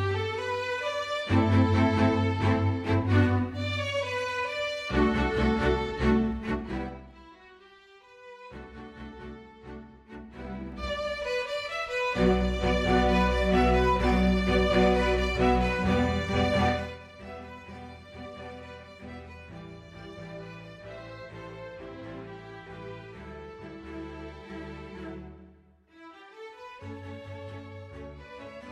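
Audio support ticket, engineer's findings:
Zipper noise, 6.27 to 7.29 s: ticking rides on a fade-down of roughly 20 dB, around ten clicks a second. Gain stage stepping in about 2 dB jumps, no ramp between, so each jump clicks.

Zipper noise again, 10.36 to 10.87 s: faster zipping on the way back up, roughly 20 dB, around twenty steps a second, same 2 dB increments. Same unsmoothed gain control, just moving quicker.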